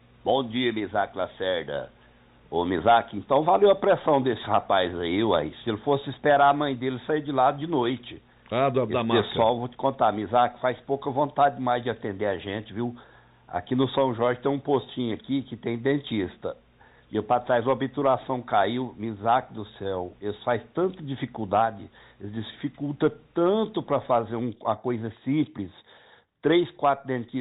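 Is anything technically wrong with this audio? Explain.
No, the audio shows no technical faults; it carries the narrowband character of a G.711 mu-law call path at 64 kbps, with nothing above 4 kHz, which is what that codec is designed to pass.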